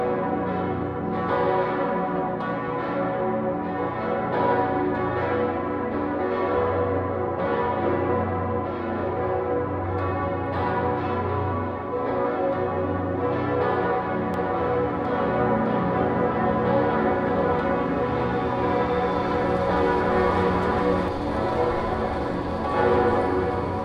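From 14.34 s to 21.08 s there's a doubled audio track: a second full-band copy trails the original by roughly 0.7 s, about 5 dB quieter, with no decay or room colour, switching on and off abruptly. Likely a slower capture path or misaligned edit.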